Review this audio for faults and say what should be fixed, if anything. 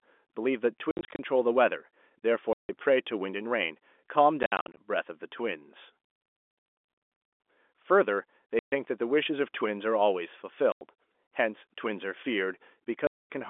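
The speech cuts abruptly to dead silence at 0.91–1.19 s, 2.53–2.69 s, 4.43–4.77 s, 8.59–8.72 s, 10.72–10.81 s and 13.07–13.30 s. This is packet loss filled with silence. The gaps come in 10 ms steps, which fits 10 ms packets. Adding packet loss concealment at the receiver would mask these holes.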